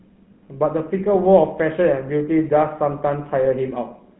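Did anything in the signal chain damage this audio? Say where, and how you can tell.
Yes. The damage happens at the codec stage and runs through the whole clip, with the plainly audible buzzy, gravelly roughness of the GSM full-rate codec. The speech sits in a 150 Hz to 3.4 kHz telephone band with nothing above 3.8 kHz, consistent with the 13 kbps full-rate coder. The codec rebuilds the voice from a vocal-tract filter fed by a sparse, regularly spaced pulse excitation, and that coarse excitation produces the grainy texture.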